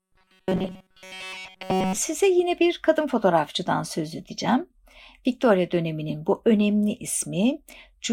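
Speech clip, and from 0.01 to 1.97 s it collapses into robotic sound from repeated short buffers: a rigid, metallic buzz at 188 Hz that still loosely tracks the speech. That likely comes from starved audio, with a roughly 5.3 ms chunk looped through essentially that whole stretch.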